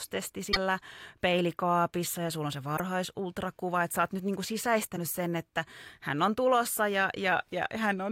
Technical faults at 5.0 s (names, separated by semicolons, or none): damaged data in a compressed stream